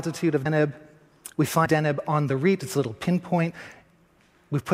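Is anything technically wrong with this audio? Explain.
Yes. Compressed frames are skipped at 0.45, 1.65 and 3.50 s. Each time, playback jumps ahead by roughly a tenth of a second, or more at 1.65 s, consistent with several missing 24 ms frames. On a waveform it appears as a sudden envelope discontinuity, and on a spectrogram as a thin vertical seam.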